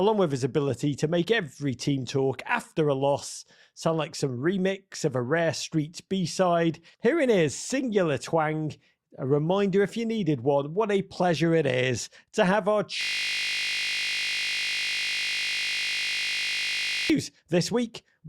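At 13.01 s, just after "is to have our", the system hang loop sets in: the computer or its audio driver stalled while the sound hardware kept replaying the same ring buffer. A 20 ms piece of the speech repeats about 200 times until 17.10 s, which fits a buffer of that length. Because the loop is so short, it is heard as a steady buzz at 50 Hz instead of a stutter, lasting about four seconds.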